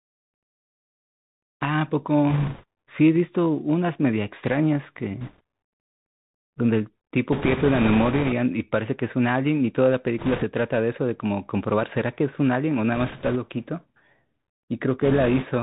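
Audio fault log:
Throughout: Bluetooth CVSD headset codec. The speech is cut off near 4 kHz and sounds boxed in. Single-bit up-or-down steps lag behind loud bright sounds, so s sounds rasp. A grainy hiss sits under everything. This fits a 64 kbps link.
2.30–2.64 s, 5.21–5.41 s, 7.32–8.33 s, 10.19–10.44 s, 12.95–13.37 s, 15.02–15.45 s: bit errors on a Bluetooth voice link. A rushing crackle rides over the speech in each burst. The longest burst is at 7.32 s. There are no sharp clicks, because each flipped bit nudges the signal only slightly and then fades.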